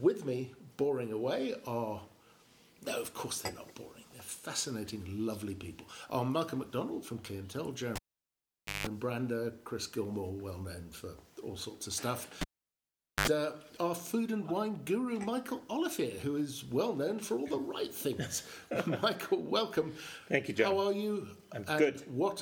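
At 7.96 s a cable is pulled and plugged in. A pop cuts the sound. Near silence lasts about 0.86 s. As the plug goes back, only its tip touches at first, so a 50 Hz mains buzz breaks through for 172 ms. A second pop brings the sound back at 8.87 s. The same fault recurs from 12.41 s to 13.28 s. The gap is about 0.81 s and the buzz is shorter, 74 ms.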